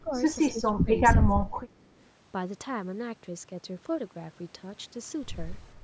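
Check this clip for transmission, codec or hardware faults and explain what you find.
The speech in this clip has two call-path faults, both tied to echo cancellation.

Speech suppressed in double talk occurs at 0.01–0.14 s, 0.51–0.89 s, 1.17–1.73 s and 5.75–5.8 s. This is likely an echo canceller mistaking overlapping talk for echo and attenuating everything. The voice sinks by about 15 dB, then about 25 dB in the two middle stretches, and only about 5 dB at the end.

An echo leak at 1.81–1.86 s is likely a far-end loudspeaker echo the canceller failed to remove. A faint copy of the voice, delayed by 293 ms and roughly 40 dB under the speech, slips through as a brief scrap.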